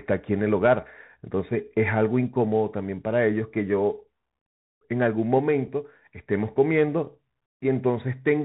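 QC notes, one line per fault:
Throughout, Bluetooth CVSD headset codec: the speech is cut off above 4 kHz, s sounds turn scratchy, loud high passages distort, and a granular hiss sits underneath. This fits a 64 kbps one-bit delta stream whose adapting step size cannot keep up with fast, high signals.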